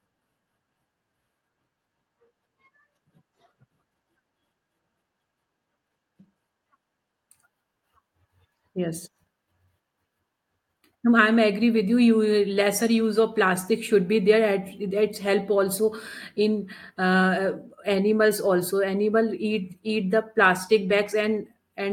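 Speech recording; no technical faults can be heard anywhere.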